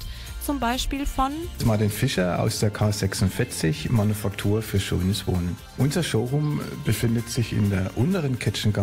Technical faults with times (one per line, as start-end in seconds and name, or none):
none